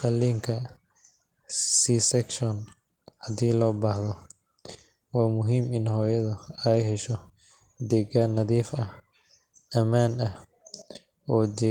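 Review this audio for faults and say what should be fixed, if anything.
Nothing stood out on listening to this speech recording, so there is nothing here to fix.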